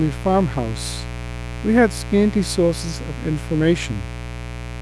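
A steady, raspy buzz sits under the speech from the first moment to the last, fairly loud at roughly ten decibels below the talker. It is mains buzz on a 60 Hz supply: sharp switching spikes, such as those from a dimmer, a rectifier or an unshielded cable, couple into the signal path twice per cycle. That spreads energy across many harmonics of 60 Hz, reaching up into the kilohertz range and giving the noise its edge.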